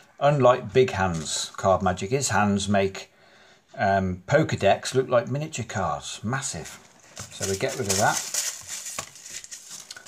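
The audio signal is intact, with nothing in it that points to a fault in the recording or playback chain.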